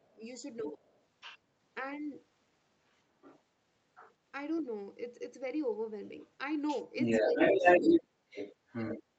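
Right from the start, 0.0 to 0.81 s, the talker dips by around 10 dB over roughly 0.4 s in total. That's speech suppressed in double talk, likely the echo canceller ducking everything when both ends talk at once. From 0.62 to 1.38 s the other side's voice leaks through at around 15 dB below the talker, then fainter scraps at about 20 dB down from 2.97 to 3.42 s and 3.95 to 4.13 s. That's likely residual loudspeaker echo the canceller missed. From 6.06 s to the end the leak takes over, sitting around 10 dB above the talker. Inside that stretch the suppression bites hard. The talker drops by about 30 dB across 7.25 to 8.35 s, roughly 0.7 s of it affected, and again by about 25 dB from 8.99 to 9.16 s.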